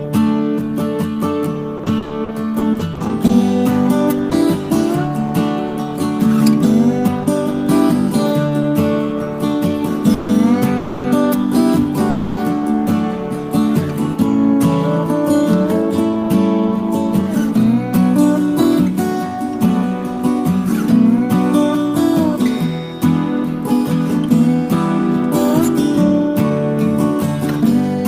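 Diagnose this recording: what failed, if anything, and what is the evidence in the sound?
Network stage, repeated packet loss (robotic sound): from 1.77 to 4.33 s the audio turns choppy. There are sixteen short holes, the longest 40 ms, each patched by extending the preceding sound. About 260 ms of real audio is missing, and concealment covers 14% of that stretch.

Network stage, call audio freeze: at 10.14 to 10.31 s, 10.77 to 11.06 s and 12.10 to 12.39 s the sound stalls into a fading held buzz lasting 150, 270 and 270 ms. It then resumes where it stopped with nothing lost, likely delayed packets draining the jitter buffer.

Buffer stage, jitter buffer speed-up: from 16.00 to 20.19 s the audio runs at 103% speed, and from 23.42 to 26.60 s at 104%, with pitch unchanged. The receiver trims short pitch-period slices to shed backlog, removing roughly 150 ms per stretch.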